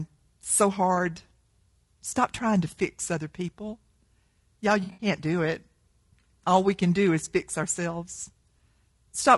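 Speech, with a rough, grainy texture throughout: noise sits between the voice harmonics and the top band sounds thin and synthetic. The likely cause is low-delay AAC compression (AAC-ELD), whose short frames resolve pitch harmonics poorly, and the plainly audible damage fits a low bitrate around 32 kbps. AAC frame loss with concealment occurs twice. At 2.09–2.12 s, just before "trying to fix other", a single lost frame leaves a brief smeared patch where the decoder filled in from the last good spectrum. From 4.83 to 5.07 s, just before "do it", several lost frames scattered over about 160 ms, with the longest gap around 70 ms, produce a noisy, phasey stretch where the concealment repeats and reshapes old spectral content.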